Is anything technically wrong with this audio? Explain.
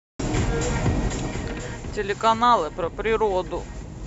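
Yes, there's zipper noise from 0.98 to 2.2 s. The level drops by about 15 dB in coarse 3 dB jumps, roughly five a second, with no smoothing between them. Each jump leaves a small click, so you get a ticking zip riding on the speech while it fades.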